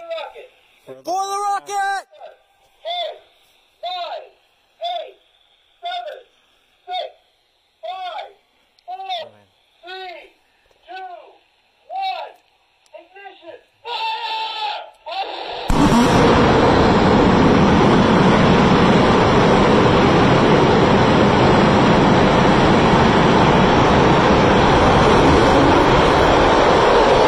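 The audio has compressed frames skipped at 9.22–9.24 s and 21.60 s. Roughly 150 ms and 100 ms vanish as frames of about 23 ms go missing.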